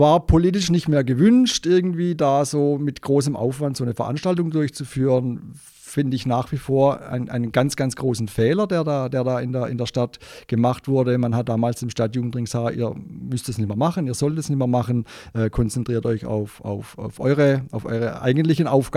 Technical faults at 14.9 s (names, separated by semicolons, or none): none